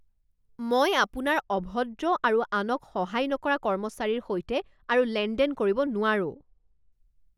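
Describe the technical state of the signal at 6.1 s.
At 6.1 s the signal is still inside a stretch of de-emphasis applied wrongly, running from 1.41 s, just after "মই আপোনাৰ", to 6.92 s. A treble-cutting de-emphasis stage has acted on speech that carried no matching pre-emphasis, so the response tilts smoothly downward with frequency, reaching about 14 dB of loss at 10 kHz relative to 1 kHz. The speech sounds dull and muffled, with sibilants and consonant detail dulled.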